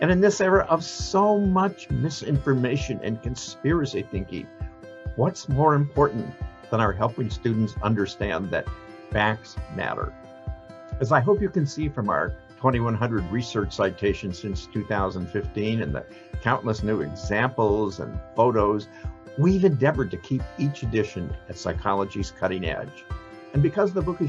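Nothing stood out as a technical problem on listening.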